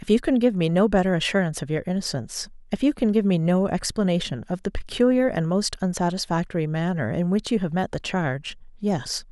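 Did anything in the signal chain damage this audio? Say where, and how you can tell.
Yes. At the driver or buffer stage, playback underran at 8.00 s: fresh samples missed their deadline, so the device replayed the last buffer rather than output silence. This repeated buffer plays a piece about 2.9 ms long three times in a row, which fits a 128-sample buffer. Each repeat meets the next with a hard join. Because the segment is so short, it registers as a brief click-like buzz rather than a stutter, and essentially no audio is lost.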